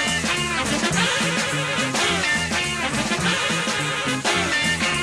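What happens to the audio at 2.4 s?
Nothing goes wrong at 2.4 s; the audio passes through that moment intact, with no dropout, click or other fault.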